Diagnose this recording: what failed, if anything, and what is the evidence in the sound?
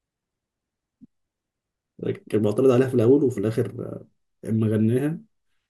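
Nothing failed at any stage of the chain: the speech runs without a dropout, discontinuity or distortion event that would point to wiring, conversion, buffering, processing, transmission or playback.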